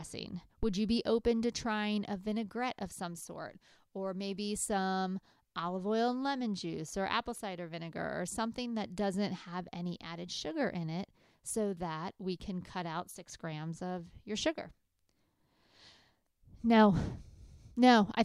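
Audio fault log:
0.63–0.77 s, phantom power thump: a supply was switched on a live input, and that sudden DC step passed through the coupling capacitors into the signal chain. The result is a deep, low thump peaking at about -23 dBFS, dying away with a decay of roughly 32 ms, so it registers as a short dull knock rather than a boom, sitting just before "you be open to".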